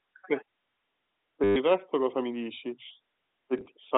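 Packet loss with last packet repeated at 1.44 to 1.56 s: 120 ms went missing, and the receiver replayed its last packet, producing a robotic 100 Hz buzz consistent with 10 ms packets. Lighter small blips follow at 3.58 to 3.66 s, where 30 ms drops in gaps of up to 10 ms.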